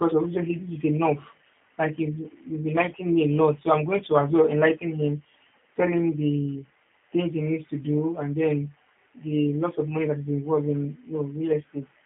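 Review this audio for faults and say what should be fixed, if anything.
G.729 codec damage runs throughout: the speech is rebuilt from a vocal tract filter, a pitch predictor and sparse pulses, giving a rough, synthetic edge. The band sits at 150 Hz to 3.6 kHz, with nothing above 3.7 kHz, which points to an 8 kbit/s G.729A path. To prevent it, record or transmit through a wideband codec at a higher bitrate instead of a narrowband telephony link.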